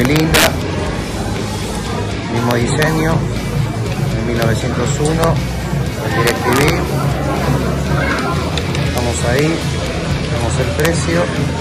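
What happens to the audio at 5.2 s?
At 5.24 s there is a single integer overflow: a loud peak pushes about 1 dB past the largest value the integer format can hold, and instead of being held at the ceiling it wraps around to the opposite extreme. The result is a sharp, violent crack rather than the flattened, buzzy roughness of clipping. Clipping squares a peak off at the limit, whereas here the sample jumps across the entire range in an instant.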